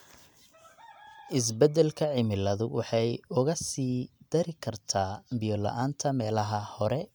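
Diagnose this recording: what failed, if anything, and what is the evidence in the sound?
Nothing failed: no stage between capture and playback leaves an audible mark anywhere in the speech.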